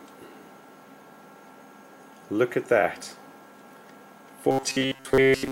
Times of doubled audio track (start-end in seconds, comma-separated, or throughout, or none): none